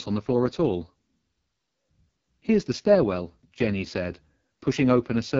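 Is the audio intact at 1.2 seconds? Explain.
No, at 1.2 seconds the speech is running through the AMR wideband (HD Voice) codec, which affects the whole clip. It sounds like the 6.6 kbit/s rate, so the vocal-tract model is starved of bits and the voice comes out rough and raspy, with nothing above about 7.6 kHz.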